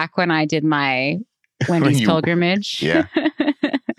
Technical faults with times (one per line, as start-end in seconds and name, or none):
none